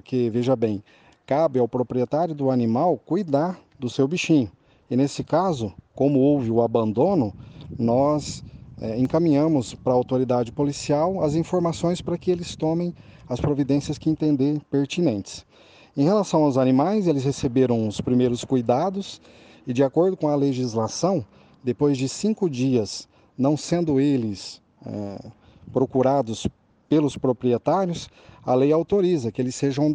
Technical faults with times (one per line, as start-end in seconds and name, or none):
9.05 block of digital silence
27.16 block of digital silence